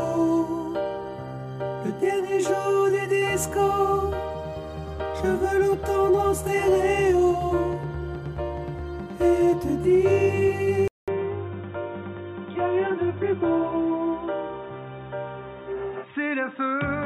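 The recording likely switched to a poorer input device at 10.88 s: after a 200 ms silence, the rest of the sound loses everything above 3.8 kHz and turns dull and boxy, at about the same level, over a faint new background noise well below the signal.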